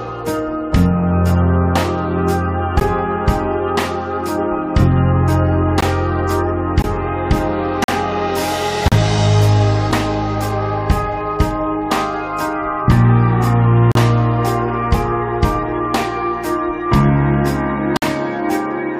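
Gaps between stream segments cut in at 2.80, 5.81, 6.82 to 6.84, 7.84 to 7.88, 8.88 to 8.92, 9.92, 13.92 to 13.95 and 17.97 to 18.02 s. Segment timestamps leave small holes on the 1-second grid. Each hole is filled with silence. They are hard-edged dropouts of 6 to 50 ms, and no audio is lost.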